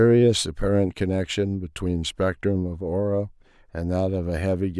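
No technical faults can be heard anywhere in the recording; the signal stays continuous and steady throughout.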